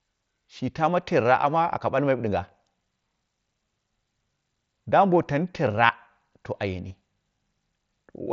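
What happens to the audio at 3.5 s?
Nothing goes wrong at 3.5 s; the speech carries on intact there, passing through the wideband Bluetooth headset link as it does throughout.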